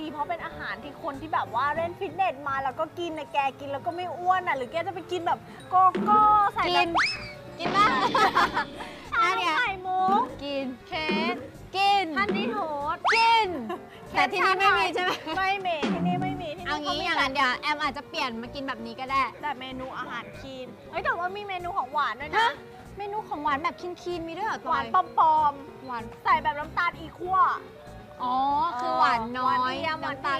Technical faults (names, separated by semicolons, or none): none